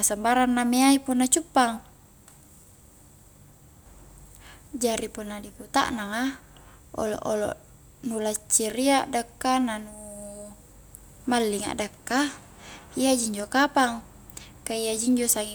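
Nothing goes wrong anywhere in this speech recording, so there's no technical fault to point to.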